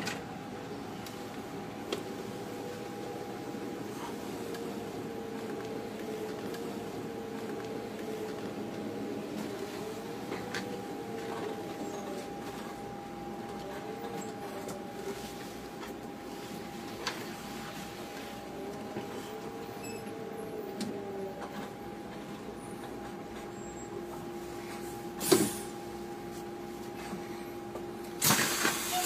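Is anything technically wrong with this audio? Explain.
Yes. From 6.46 s to 8.46 s a stretch of about 2.0 s of the programme plays a second time, with a small blip at the point where playback jumps back. This is a stream segment repeated: the player fetched or queued the same chunk of the stream twice and played both copies in sequence. The audio loses its place in time and restates material that was already heard.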